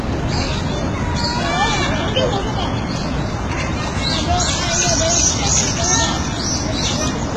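Heavy HE-AAC compression is the likely cause of what runs through this recording of sounds from start to finish: the encoder has coded only the lower spectrum and synthesised the treble by copying lower bands upward, at a rate low enough to suggest roughly 16 kbps. The upper range therefore sounds artificial, with gritty, metallic texture where the rebuilt harmonics fail to match those below, and nothing at all remains above 11.8 kHz.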